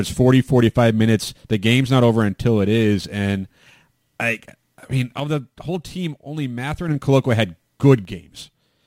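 From 5.20 to 6.88 s and again from 8.05 s to the end, the speech drops abruptly by about 6 dB, likely one channel dropping out before the mono sum. The waveform shows a sudden step down in amplitude, and the spectrogram dims uniformly across all frequencies.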